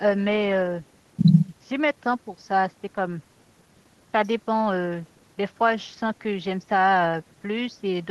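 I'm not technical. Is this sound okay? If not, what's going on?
Yes, nothing in this speech recording sounds faulty or needs fixing.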